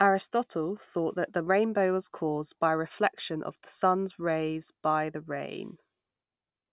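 No technical faults can be heard in this speech recording. There is nothing here that calls for a time mark or an explanation.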